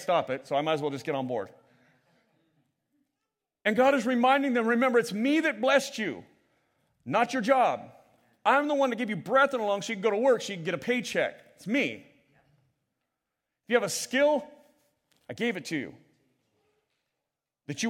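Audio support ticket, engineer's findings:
No audible signal faults found in the speech recording; level, continuity and timing hold steady throughout, with no dropouts, discontinuities or level irregularities detected.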